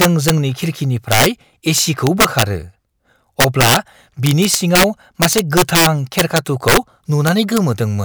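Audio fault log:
0.01–7.58 s, integer overflow: loud passages at 0.01–0.30, 1.12–1.26, 1.78–2.42, 3.40–3.77, 4.26–4.84, 5.22–6.77 and 7.27–7.58 s exceed full scale by about 2 to 9 dB, and the samples wrap to the opposite sign instead of clipping, producing violent, harsh cracks.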